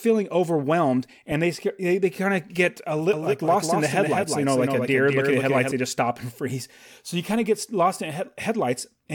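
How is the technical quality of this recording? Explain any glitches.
One glitch stands out. From 3.13 to 5.71 s there is a doubled audio track. A second copy of the speech trails about 200 ms behind, roughly 5 dB quieter, with no room colour. It likely comes from the audio being captured twice through a slower path. The copy starts and stops abruptly.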